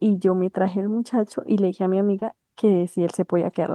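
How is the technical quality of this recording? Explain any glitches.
One glitch is present: short concealed packet loss at 2.19 to 2.23 s. About 20 ms never arrived; the decoder extrapolated the preceding sound, leaving a brief smear or wobble.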